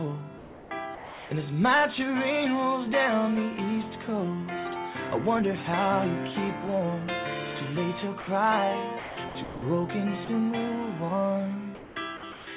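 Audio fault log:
0.38–1.31 s, 8.99–9.62 s, 11.75–12.47 s, sound chopped by the voice detector: the sound stutters in and out, with flat hiss patched in for about 0.69 s of the first stretch and 0.42 s of each later one. It's likely the sender's detector flipping on and off.
8.21–8.27 s and 10.25–10.28 s, sound dropped by the voice detector: quick 60 ms and 30 ms holes where the sound gives way to steady noise and then snaps back. The detector likely mistook quiet sound for background and stopped sending, so the receiver filled the gap with comfort noise.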